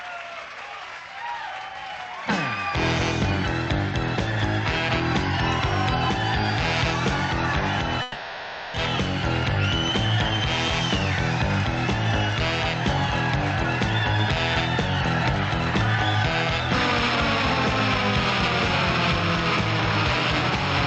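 Gain pumping runs through the whole clip. The level is likely set far too hot at the microphone, so a fast compressor or limiter keeps clamping down on each loud moment. The level swings by roughly 5 dB, giving a squashed, breathing sound.

A long network dropout from 8.02 to 8.76 s likely comes from a stall in incoming audio. For 0.72 s the receiver plays a fading buzz or hiss continuing the last sound instead of the real signal. When the audio resumes, that stretch is simply gone.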